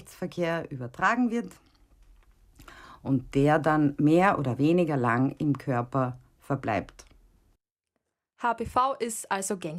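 A speech recording, and nothing is technically wrong with it.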